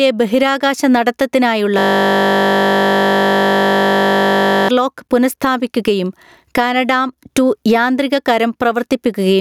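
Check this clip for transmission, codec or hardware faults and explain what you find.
Two faults are present in this speech recording: gain pumping throughout, and a system hang loop in the first half.

Gain pumping runs through the whole clip. The likely cause is a preamp gain set far too high for the microphone, with a fast limiter or compressor clamping down each time the talker gets loud. The level swings by around 15 dB. Loud and quiet passages sit unnaturally close together, and the speech sounds squeezed and breathing.

A system hang loop occupies 1.79 to 4.69 s. The host or audio driver stalled while the sound hardware kept replaying the same small ring buffer, so one 20 ms slice of audio repeats exactly, well over a hundred times. That fits a buffer of about 20 ms. At a repeat rate of 50 Hz the slice fuses into a steady, droning buzz rather than a stutter. Normal speech resumes with "പുനഃസ്ഥാപിക്കുകയും കാനഡാം".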